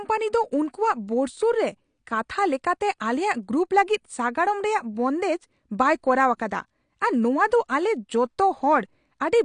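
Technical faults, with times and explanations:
throughout, AAC compression: likely AAC-LC coding at around 32 kbps cuts everything above 9.8 kHz and under-codes bands, leaving speech dull, smeared and fizzy.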